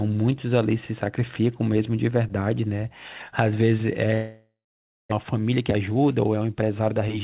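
A long network dropout runs from 4.14 to 5.14 s. The sound smears into a fading buzz, then falls silent for 0.57 s, likely from lost packets.

A jitter buffer speed-up follows from 5.23 to 7.16 s. Repeated pitch-period cuts drain the backlog, so the speech sounds hurried, running at 110% speed with unchanged pitch.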